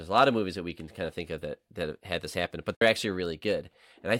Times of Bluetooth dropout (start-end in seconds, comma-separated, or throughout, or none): 2.75-2.81